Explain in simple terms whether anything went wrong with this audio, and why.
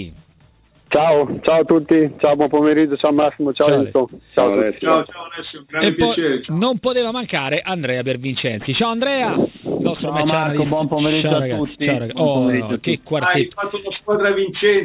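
Aliasing runs through the whole clip. The high sounds were squeezed into a lower sample rate without first being filtered, which fits a drop to 8 kHz. So anything above 4 kHz folds back down as wrong, unrelated pitches, giving a gritty, metallic edge.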